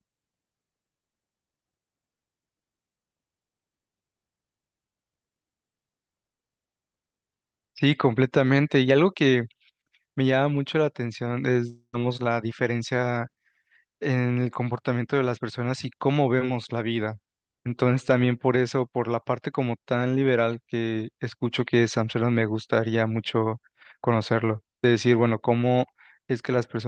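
From 11.69 to 11.95 s the speech smears into a fading buzz, then about 70 ms of near-silence, likely a long network dropout, showing as a blurred, flattened spectrogram band.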